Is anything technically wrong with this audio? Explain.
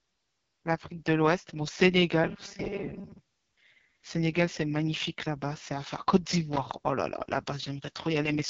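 Yes, there are three problems.

Throughout, the speech passes through the AMR wideband (HD Voice) codec at 6.6 kbit/s, its lowest rate. It models the vocal tract with a pulse-driven excitation and synthesises the top band as shaped noise, so nothing is heard above 7.2 kHz. At this rate the damage is heavy: the voice sounds rough and raspy. Unlike simple low-pass filtering, the grain sits inside the speech itself, not just in a missing treble.

From 2.24 to 3.18 s the voice turns into a rigid, metallic buzz near 200 Hz that still roughly tracks the speech. This is most likely robotic sound from repeated short buffers. Audio arrived too seldom, so a chunk of about 5 ms was replayed to fill the gaps, with roughly half the material repeated in place of real audio. The fixed pitch, unrelated to the speaker's own intonation, separates this from codec rasp.

From 6.52 to 6.58 s a brief, irregular burst of scratchy crackle cuts in. 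This is loose connector crackle: a worn or dirty contact rapidly makes and breaks, chopping the signal. It is uneven and sits on the line itself, unlike a single clean dropout or the steady texture of the codec.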